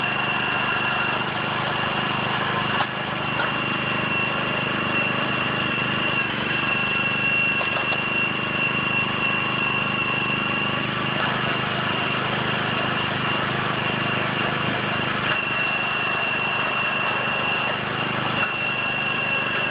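No technical faults can be heard anywhere in the recording.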